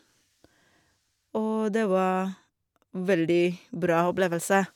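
No technical faults can be heard anywhere in the recording; the speech signal stays continuous and steady throughout.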